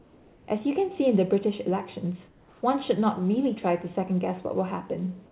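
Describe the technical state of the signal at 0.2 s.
At 0.2 s the background is replaced by comfort noise from 0.00 to 0.48 s: a steady, featureless hiss about 3 dB quieter than the real ambience. The likely cause is discontinuous transmission, with the receiver synthesizing shaped noise while the sender paused, all band-limited to 4 kHz.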